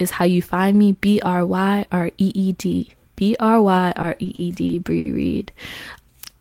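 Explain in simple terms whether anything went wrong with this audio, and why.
Between 3.93 and 5.07 s the speech has repeated stalls (stutter): seven brief hitches, the longest about 60 ms, where the audio waited for late data and held the last sound. Unlike dropouts, nothing is missing. The speech just drags and catches.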